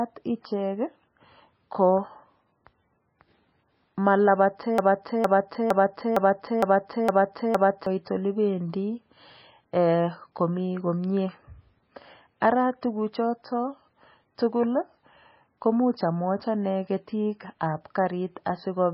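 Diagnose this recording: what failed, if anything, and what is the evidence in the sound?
The codec stage has likely failed: MP3 compression starved of bits. Nothing survives above 5.6 kHz, and the speech sounds heavily watery and swirly throughout, with smeared onsets, which fits a bitrate near 17 kbps. A plain low-pass filter would cut the treble cleanly, without this frame-to-frame warbling.

From 4.78 to 7.86 s the playback or stream stage produces a broken-record loop. A 0.46 s fragment repeats back to back seven times, likely because a stalled buffer was resent. The repeats are identical and do not decay, so this is not an echo. The audio for that span is lost.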